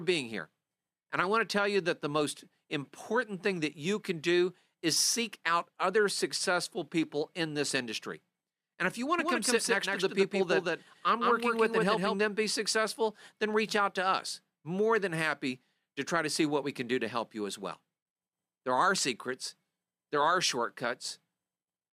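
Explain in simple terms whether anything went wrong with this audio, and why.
Something did go wrong, for about three seconds in the middle. Right after "if you want", at 9.19 s, the speech suddenly gets a doubled audio track: a second, slightly quieter copy trails the original by roughly 150 ms, so everything sounds like it's talking over itself. It has no echo tail or room sound, and it cuts out just as abruptly at 12.15 s, before "them be successful then". The likely cause is the sound being picked up twice, once through a slower route.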